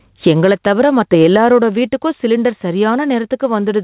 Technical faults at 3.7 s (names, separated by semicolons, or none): gain pumping